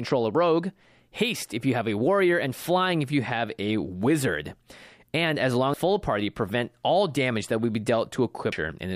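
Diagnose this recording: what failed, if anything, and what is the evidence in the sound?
The codec stage failed: damaged data in the compressed stream produces brief disruptions in the speech at 5.74 s and 8.52 s. The decoder misreads corrupted frames, loses sync and hunts for the next frame header. Each event shows as a narrow vertical smear on a spectrogram and a waveform discontinuity.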